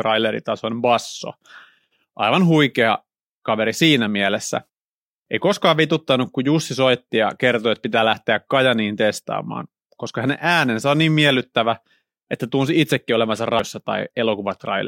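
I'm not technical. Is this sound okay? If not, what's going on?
No. There is a CD skip at 13.59 s, right after "että tunsi itsekin olevansa". A CD player reads the disc with a laser that follows a tightly wound spiral track. Here a bump or a flaw on the disc knocked the laser onto another turn of that spiral. The player went silent for a tiny fraction of a second, which you hear as a small tick, and then the speech carries on from a different spot instead of continuing smoothly.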